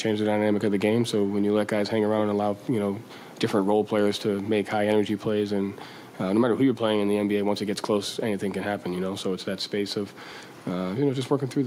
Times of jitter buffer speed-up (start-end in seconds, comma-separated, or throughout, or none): none